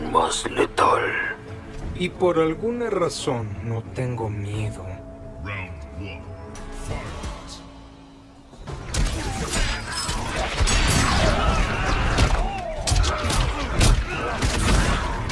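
Nothing in here trips the ear: no dropouts, glitches or odd artefacts turn up anywhere along the way.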